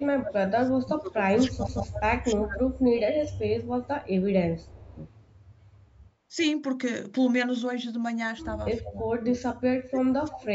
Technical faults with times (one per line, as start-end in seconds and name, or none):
0.00-2.65 speech suppressed in double talk
1.68 CD skip
2.75-4.08 echo leak
4.58-4.73 echo leak
4.74-5.01 speech suppressed in double talk
5.22-5.26 echo leak
8.76-10.55 speech suppressed in double talk